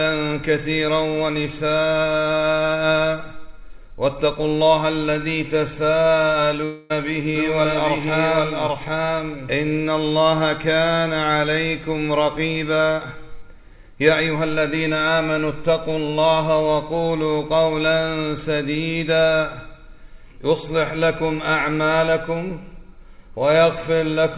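At 6.64 s the sound breaks up in a long network dropout lasting until 6.92 s. About a quarter second of audio is missing. The receiver fills the gap by stretching the last sound into a buzz or hiss that fades out. The gap never drops to full silence. Audio resumes at 6.92 s, but the missing stretch is gone. This is likely packet loss on the network, with the receiver concealing the hole.

From 7.35 s to 9.69 s there is a doubled audio track. A second copy of the sound plays about 0.7 s behind the first, at roughly the same level. It is full-band and dry, with no decay or room colour, so it sounds like a clean repeat and not like an echo. It starts and stops abruptly. The likely cause is the same signal captured twice, once through a slower path. Like everything on this call line, both copies carry nothing above 4 kHz.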